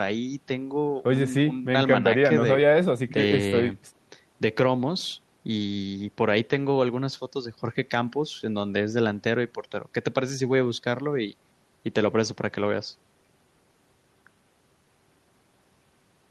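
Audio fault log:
No faults are audible in this speech recording.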